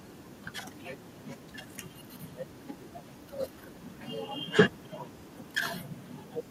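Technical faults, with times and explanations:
0.97–2.08 s, 2.79–3.25 s, 3.77–3.97 s and 4.45–5.53 s, echo leak: a faint copy of the speech trails the original by 390 ms, about 30 dB down. The likely cause is a far-end loudspeaker whose echo canceller let part of the pickup return. On a spectrogram, weak, ghostly harmonic traces repeat the speech pattern shifted right by 390 ms; the waveform shows only a slight low-level smear after each burst.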